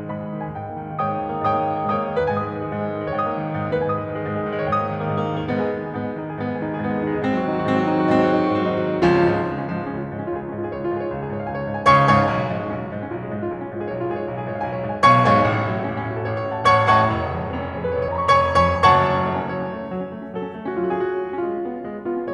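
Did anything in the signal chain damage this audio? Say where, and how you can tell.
Yes. Compressed frames are skipped at 3.71 s and again at 18.08 s, a fault at the codec decoding stage. The music jumps forward at each point, by around 150 ms at the first and around 70 ms at the second, which fits whole frames of roughly 26 ms going missing. These frames were either absent from the file or discarded by the decoder as damaged.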